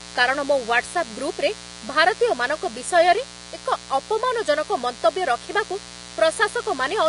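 Mains buzz runs through the whole clip: switching spikes from a dimmer, rectifier or unshielded cable ride on the 60 Hz supply, and their harmonics climb well into the kilohertz range, giving a steady, raspy buzz roughly 20 dB below the speech.

Also throughout, the speech has nothing above 10.5 kHz and carries a dull codec texture. This is likely low-bitrate audio saved at a high bitrate: a heavily compressed first encoding, re-saved generously, keeps every loss and cut-off while adding nothing back.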